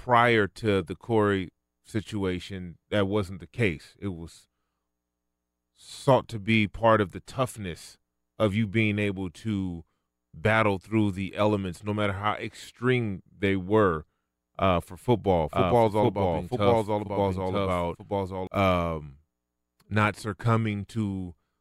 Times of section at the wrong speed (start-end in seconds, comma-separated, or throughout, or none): none